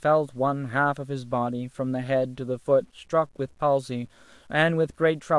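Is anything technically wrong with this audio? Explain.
Yes. Throughout the speech, the signal was likely reduced to very low resolution by truncation without dither, consistent with roughly 9-bit audio. This is low bit depth without dither. Because the rounding error isn't randomised, it tracks the waveform and becomes distortion rather than steady hiss, sitting around 40 dB below the signal. Quiet passages and fading word endings sound gritty and grainy, with a rough texture that shifts as the speech changes.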